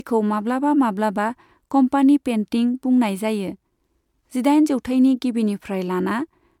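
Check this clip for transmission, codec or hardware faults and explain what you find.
The speech shows a codec fault throughout: generation loss. The likely cause is MP3 encoding repeated about four times in a chain, with the audio decoded and re-encoded at a rate that points to 128 kbit/s. Each pass re-quantises on a shifted frame grid, so the noise and missing spectral bands compound. The result is a swirly, hollow, smeared quality beyond what a single pass at that rate would give, with consonant attacks blurred.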